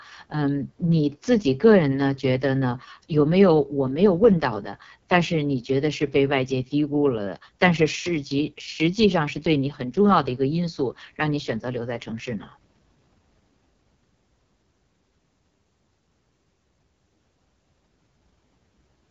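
From start to finish the speech sounds rough and raspy, with a hard top edge and nothing above about 7.5 kHz. This is heavy AMR wideband (HD Voice) codec damage, which fits the lowest 6.6 kbit/s mode, too sparse to model the voice cleanly.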